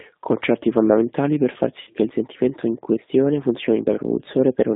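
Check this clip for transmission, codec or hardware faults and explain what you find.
Two faults are audible: a G.729 codec throughout, and one concealed packet loss at 1.81 s.

The G.729 codec runs at 8 kbit/s across the whole clip. It rebuilds speech from a pitch predictor, a vocal tract filter and sparse pulses, which leaves a rough, synthetic texture inside a 200 Hz to 3.7 kHz band. That roughness is what separates it from simple telephone band-limiting.

VoIP packet loss concealed by the speech codec occurs from 1.81 to 1.91 s, after "fondamentali per far" and before "che il sentimento in". About 60 ms is missing, which fits three lost packets. The decoder stretches its last pitch and filter into a buzzy tone or coloured noise that fades, rather than leaving a silent dropout.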